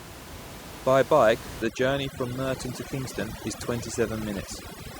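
From 1.62 s to the end, overdone noise removal takes over: a noise reduction stage set far too aggressively pulls down any frequency band that sits close to its noise estimate. The room noise, about 12 dB below the speech before this point, drops and breaks up into twinkling specks, and the quieter parts of the speech go with it. A spectrogram shows isolated bright flecks scattered across a blank background.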